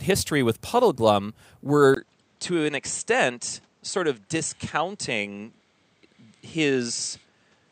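At 1.94 s the speech drops out for about 20 ms, then returns duller and a few dB quieter, with nothing above 8.6 kHz and a faint new background noise, through to the end. That's likely the input switched to a poorer device.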